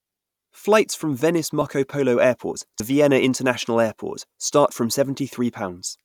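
At 1.62 s and 2.80 s, compressed frames are skipped: the speech jumps ahead about 30 ms, then about 70 ms, consistent with 32 ms frames.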